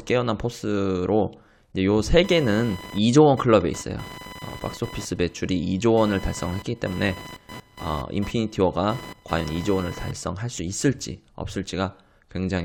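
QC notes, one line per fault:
2.24–10.22 s, computer activity noise: a buzzing, chirping layer roughly 20 dB below the speech, pulsing at around 1 kHz, as processor or graphics load shifts the shared audio ground. On a spectrogram it shows as ragged harmonic stripes near 1 kHz that ignore the speech.
3.33 s and 10.58 s, compressed frames skipped: the audio jumps forward by about one frame, roughly 20 ms, which fits a 23.2 ms codec frame.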